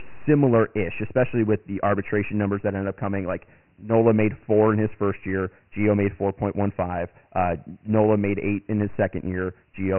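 From the first moment to the last, the speech carries Dialogic VOX ADPCM damage, and it's heavy. Nothing comes through above 3 kHz, which fits the 6,000-samples-a-second flavour of that 4-bit coder, so everything sounds boxed-in and phone-menu-like. The coder tracks the waveform in coarse steps, so there's a gritty hiss riding along with the speech, rising and falling with it rather than sitting underneath as a steady floor.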